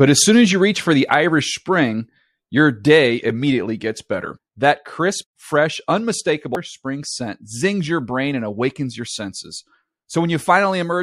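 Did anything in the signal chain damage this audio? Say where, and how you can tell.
Yes. At 6.55 s the speech breaks into a brief blip lasting under 20 ms, which points to damaged data in a compressed stream at the codec or storage stage. Corrupted bytes made the decoder misread those frames and lose sync until it found the next valid frame header. Unlike network packet-loss concealment, it is not smoothed over.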